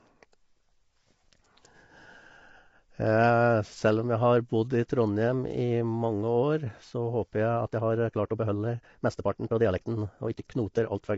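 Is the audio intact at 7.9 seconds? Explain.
No. At 7.9 seconds the audio sits inside a time-stretched section running from 7.50 s to the end of the clip at 11.18 s. The speech suddenly plays about 1.54 times faster while its pitch stays the same, which points to software squeezing this stretch to fit a shorter length, likely by dropping short slices of the waveform and joining what remains. That cutting makes the delivery sound rushed.

The same moment also carries low-delay AAC compression, which runs through the whole clip. The speech sounds plainly rough and grainy, with noise filling the gaps between the harmonics and nothing above 7.7 kHz. That combination fits AAC-ELD at around 24 kbps, the likely cause. Its very short frames resolve pitch harmonics poorly and need more bits, so at this rate the coder cannot keep the voice clean and leaves the top band missing.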